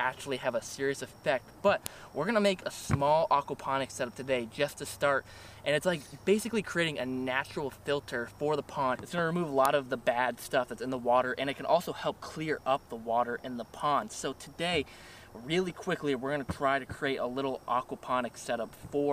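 At 1.86 s and again at 9.65 s there's a sharp, loud snap that cuts straight through whatever the sound is doing. That's a file header played as audio: the clip looks like it was stitched from separate WAV pieces without stripping each piece's header, so those few dozen bytes of metadata get read as sample values. The result is a brief burst of junk, heard as a crisp click marking each join.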